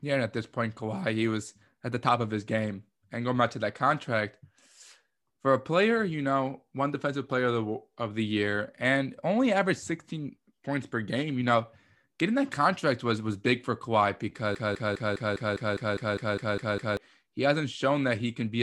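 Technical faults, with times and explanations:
14.55 to 16.97 s, broken-record loop: the speech freezes into a stutter, one fragment of about 0.2 s (203 ms) playing twelve times back to back with identical timing and tone, so it sounds mechanical rather than spoken. Whatever should have been said during those 2.4 seconds never arrives. The likely cause is a player, encoder or stream that stalled and kept re-sending the last chunk it held until fresh audio resumed.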